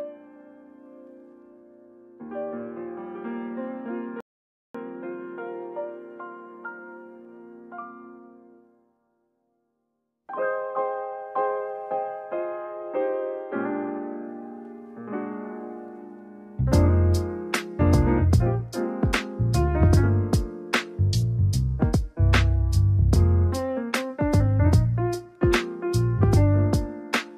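At 4.21 s the player exhausted its store of downloaded audio and had to wait for more data before it could continue, a rebuffering stall. Playback halts and the sound drops to silence until 4.75 s, then picks up exactly where it left off, with nothing skipped or repeated. The cost is time rather than content: the gap adds about 540 ms to the running length of the clip.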